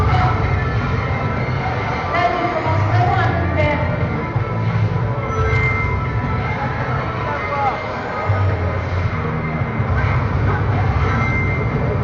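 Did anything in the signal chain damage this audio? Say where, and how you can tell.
No, nothing in the chain audibly damaged this audio.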